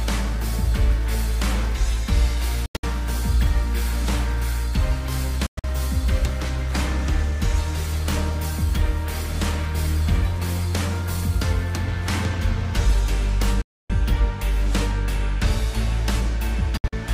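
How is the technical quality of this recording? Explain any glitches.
The recording has four short holes where the sound cuts out abruptly and then picks up further along, as if it kept playing underneath: 2.66–2.84 s, 5.46–5.64 s, 13.61–13.90 s and 16.77–16.93 s. That's likely a Bluetooth dropout, with packets arriving too late and being dropped. The first two and the last are broken-up gaps, and the third is one solid silence of nearly 0.3 s.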